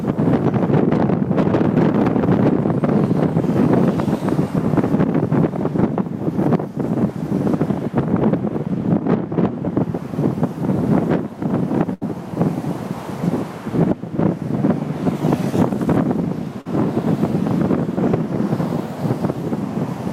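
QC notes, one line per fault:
11.93 to 12.03 s, burst of packet loss: about 80 ms of consecutive audio data arrived too late or not at all, so the receiver extended the last sound for roughly 78 ms while fading it down. This gives a held, dying tail before the sound resumes further on, with that stretch gone.
16.61 to 16.67 s, short concealed packet loss: about 40 ms never reached the decoder in time, and the receiver synthesised a continuation of the preceding sound for roughly 41 ms before blending back into the real signal. This leaves a brief smear or wobble where detail is lost.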